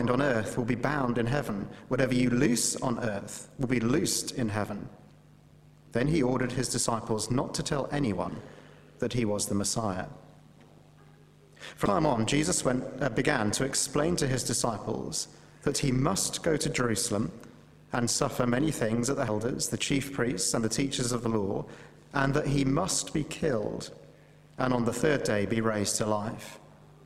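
Throughout the audio there's an overlap-add ripple: frames were rejoined without constant-gain overlap, so level pumps about 11 dB around 100 times a second, a metallic buzz with extra tones around each note.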